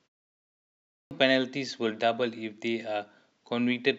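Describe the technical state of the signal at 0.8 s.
At 0.8 s the signal is inside a clipped start after a pause, from 0.47 to 1.11 s: the sleeping output device swallows about 0.64 s of speech, unlike muted pauses, which lose none.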